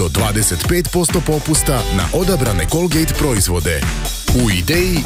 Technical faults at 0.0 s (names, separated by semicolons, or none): none